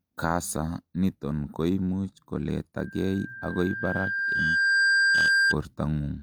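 A speech recording with loudspeaker feedback squeal from 2.79 to 5.56 s: a single 1.6 kHz tone swells over roughly two seconds to sit a few decibels above the speech. That gradual self-building growth separates it from a steady interfering whistle, which starts at full level.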